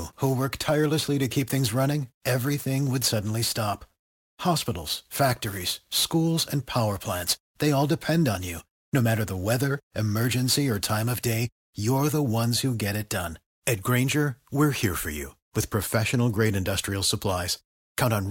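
From the start to 11.15 s, the speech carries a grainy hiss that thickens on louder passages and bright consonants and drops away in the pauses. This is sample clock jitter. The converter's clock wandered by several microseconds, so each sample landed slightly off its proper instant. Steep, fast-changing parts of the waveform suffer most from those timing slips, leaving an error roughly 20 dB below the speech that rides on it.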